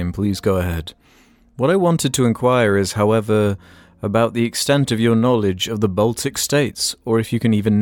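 At 2.86 s there is a block of digital silence about 0.67 ms long, or 32 samples, most likely because the program failed to fill its output buffer in time. The speech drops out abruptly and back with no fade, heard as a tick or dip.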